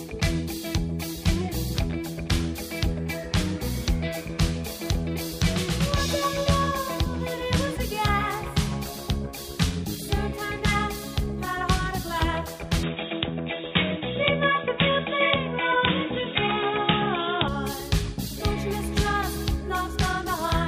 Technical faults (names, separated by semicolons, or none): input switched to a poorer device